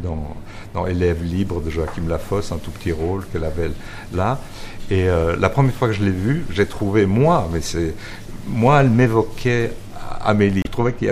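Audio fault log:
10.62–10.67 s, damaged data in a compressed stream: a short glitch where corrupted frames throw the decoder off sync until it finds the next frame header.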